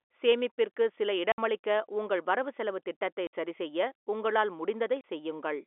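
At 1.32 s, after "சேமிப்பிற்கு சில", the speech drops out for 60 ms. This is packet loss filled with silence, with hard edges. At 3.27 s, between "உங்கள் வரவுசெலவுத் திட்டத்தை" and "சரிசெய்ய உங்களால்", another 60 ms hole appears. At 5.01 s, after "வரவுசெலவுத் திட்டத்தை சரிசெய்ய உங்களால்", a 30 ms gap follows. The lengths fit 30 ms packets, two, two, then one lost. The G.711 telephone coding keeps the sound within roughly 300 Hz to 3.5 kHz.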